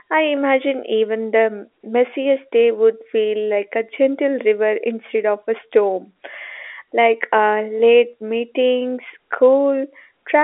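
No technical faults can be heard anywhere in the speech. The audio has the narrow sound of a G.711 telephone line, with its band running from about 300 Hz to 3.5 kHz and nothing above about 3.8 kHz, and any coding noise is faint at most.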